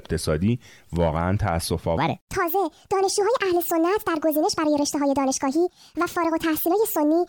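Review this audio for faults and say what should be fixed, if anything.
Section at the wrong speed, 1.98 s to 7.28 s: the speech plays 1.46 times fast and about seven semitones higher, likely from resampling against a mismatched clock. To prevent it, make sure the sample rate declared for each segment matches the rate it was recorded at before editing or playback.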